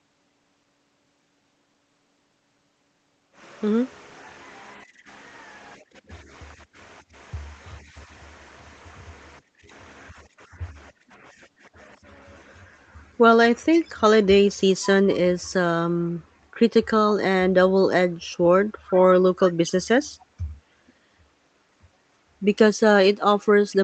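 Faint echo leak appears at 13.73–13.91 s, then as brief scraps of about 40–50 ms at 14.53, 18.86, 20.87 and 23.71 s. Each is a delayed copy of the speech arriving 450 ms late, roughly 20 dB down at first and quieter later, about 25 to 40 dB down. The likely cause is a far-end loudspeaker whose echo canceller let residue back through. On a spectrogram, these show as pale, thin smears repeating earlier harmonic patterns; the waveform barely ripples.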